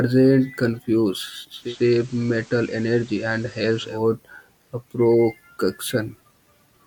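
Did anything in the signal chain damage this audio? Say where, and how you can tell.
Yes, a digital radio blending to analogue fault at the receiver, from 1.52 s to 4.04 s of this speech. The speech cross-fades over about 234 ms into the FM broadcast of the same station, then back. During that stretch the level drops by about 1 dB, and hiss sits roughly 25 dB below the speech. That is the receiver losing the digital stream and falling back to analogue FM.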